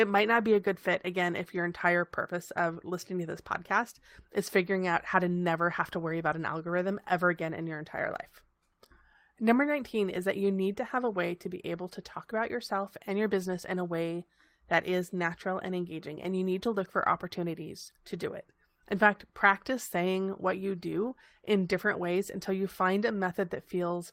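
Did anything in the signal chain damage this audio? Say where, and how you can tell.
No, nothing audible damaged it.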